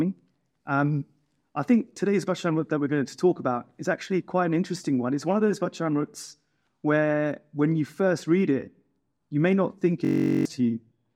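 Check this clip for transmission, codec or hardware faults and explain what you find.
One hardware-side fault appears, a system hang loop from 10.05 to 10.45 s. The machine or its driver stalled while the sound device kept replaying the same 21.33 ms block, which fits a 1024-sample ring buffer, 19 times over. That exact repetition at 46.9 Hz comes across as a flat, steady buzz, and roughly four tenths of a second of audio is lost. Unlike packet-loss concealment, which smears and fades, the repeats here are identical and mechanically regular.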